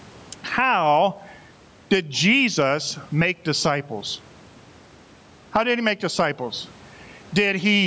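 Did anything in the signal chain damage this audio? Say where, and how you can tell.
Yes. Gain pumping runs through the whole clip, most likely from input gain set far too high, so that a fast limiter or compressor in the call processing stage clamps down on every loud sound. The gain swings by around 15 dB, pulling down as soon as speech returns. On a waveform the peaks look flattened to a near-constant height. On a spectrogram the noise floor below the 8 kHz ceiling brightens between phrases and darkens under each one.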